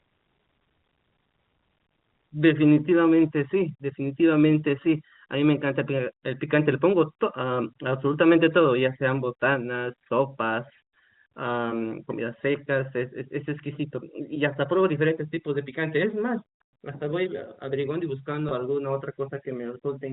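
At 18.49 to 18.51 s, about 20 ms of the speech stream went missing, which fits two lost packets, and the receiver bridged the gap by repeating the last pitch period. This packet loss with pitch repetition sounds like a brief, slightly held, buzzy tone in the telephone-band speech.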